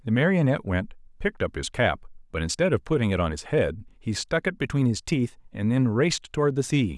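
No technical faults can be heard anywhere in this recording.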